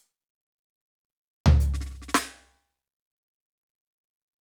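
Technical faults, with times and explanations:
No technical faults can be heard anywhere in this music.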